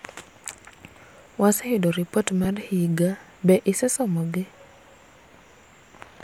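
At 0.69 s, 2.44 s, 3.94 to 3.96 s and 5.81 s the speech has brief gaps from lost LE Audio frames. The other gaps last about 10 ms, and the third lasts about 20 ms, fitting two frames. The decoder refills them with a smeared, noisy copy of the preceding sound.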